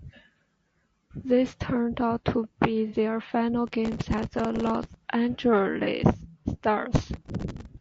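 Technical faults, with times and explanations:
Throughout, low-delay AAC compression: The speech has a rough, grainy texture, with noise filling the gaps between pitch harmonics and a thin, somewhat synthetic upper band. This is likely AAC-ELD, the low-delay coder used for calls. Its short frames give poor frequency resolution, so the harmonic structure of the voice is blurred. At a rate that fits about 32 kbps, too few bits remain to code the top band or keep the harmonics clean.
2.88–2.96 s and 5.84–5.89 s, AAC frame loss with concealment: The first gap comes right after "turned out to be" and covers about 60 ms, which fits two lost frames. The second covers about 30 ms, which fits a single frame. In each case the decoder rebuilt the missing audio from the last good spectrum. Both patches sound smeared and noisy, and the speech blurs briefly before it resumes.
3.67–4.94 s and 6.93–7.66 s, processor overload crackle: Each span carries a gritty, tearing crackle laid over the speech. 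The processor was missing its deadlines on buffers of a few milliseconds each, dozens of times in a row. Each miss replayed a fragment of old audio with hard edges. Those many small discontinuities merge into a continuous crackle, which stops once the load eases.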